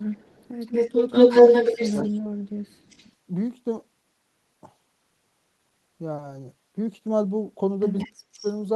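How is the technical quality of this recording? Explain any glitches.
The recording has two linked call-path problems: a returning echo of the speech and several brief moments where the speech itself is pushed down.

Echo leak: From 0.0 to 2.1 s a delayed copy of the speech trails it by about 182 ms, strong enough to sit roughly level with or above the direct sound. It returns much more faintly at 2.87 to 3.1 s, 7.98 to 8.12 s and 8.42 to 8.56 s. The likely cause is a far-end echo canceller that failed to strip out what its microphone picked up from the loudspeaker, so that sound came back down the line.

Speech suppressed in double talk: The speech abruptly sinks or breaks up at 1.74 to 2.29 s (about 20 dB down), 2.76 to 2.86 s (about 25 dB) and 8.04 to 8.45 s (about 40 dB, nearly gone). The first and last dips overlap the echo. This is likely the echo canceller meeting simultaneous talk from both ends, failing to separate the two, and attenuating everything, including the wanted speech.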